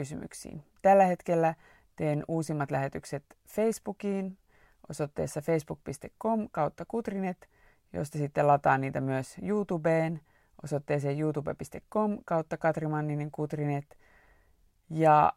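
No technical faults turn up anywhere in the speech. Nothing in the recording or playback chain draws attention to itself at any point.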